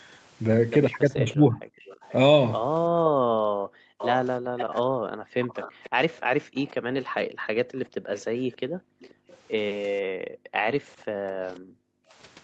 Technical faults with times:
1.10-1.61 speech suppressed in double talk
1.78-2.15 echo leak
3.09-12.15 background gated by the echo canceller
3.98-6.71 echo leak
8.17-9.37 echo leak
11.03-11.07 speech suppressed in double talk

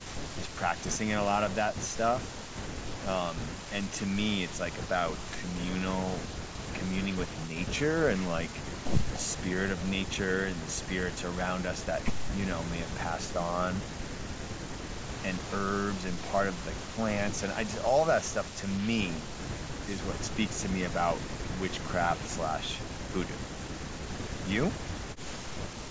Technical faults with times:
none

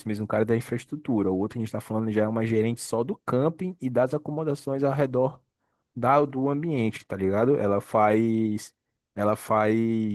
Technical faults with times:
0.00-10.14 Opus voice compression

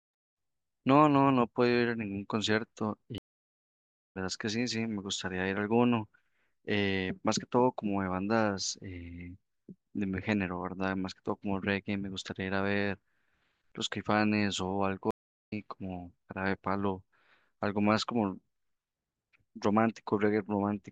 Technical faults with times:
3.18-4.17 stream reconnect
15.11-15.52 stream reconnect

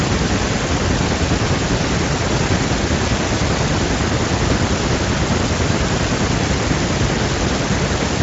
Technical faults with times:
none

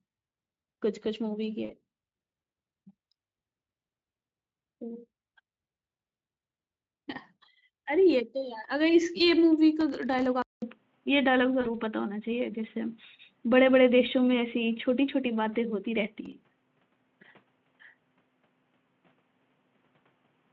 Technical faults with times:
1.65-1.72 VoIP packet loss concealed by the speech codec
9.81-10.26 processor overload crackle
10.42-20.52 input switched to a poorer device
11.61-11.70 VoIP packet loss concealed by the speech codec
16.25-16.87 processor overload crackle

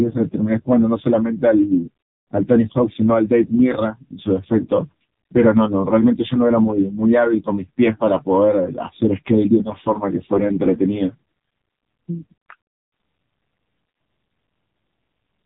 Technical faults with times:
0.00-15.46 AMR narrowband mobile codec
3.46-3.50 lost AMR speech frames
10.34-10.40 lost AMR speech frames

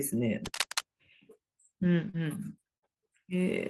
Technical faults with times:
0.45-0.81 cable scratch noise
2.09-2.15 short concealed packet loss
2.13-2.15 lost packet rebuilt from error correction
2.77-2.84 burst of packet loss
2.94-2.98 short concealed packet loss

